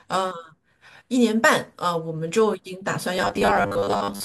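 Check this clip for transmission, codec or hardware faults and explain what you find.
There's one fault, right at the end. From 3.17 s to 4.24 s the speech goes robotic from repeated short buffers: a rigid, metallic buzz at 100 Hz that only loosely tracks the speech. Likely cause: audio arriving too slowly, so a roughly 10 ms chunk gets replayed over most of that stretch.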